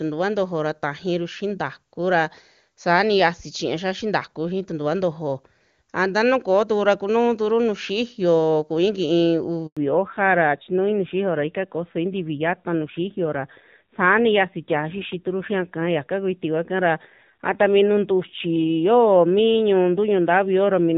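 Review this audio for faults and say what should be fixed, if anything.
At 9.67 s there's a handover gap. The call jumps networks, the sound cuts for 100 ms, and anything said in that window is lost.

Right after, from 9.77 s to the end, there's a fallback to narrowband. The clear HD Voice sound before the switch gives way to nothing above 4 kHz, so it turns dull and a bit rough, which fits AMR-NB at around 7.4 kbit/s.

To prevent both, keep the call on a network that supports wideband end to end so it doesn't hand over to a narrowband leg.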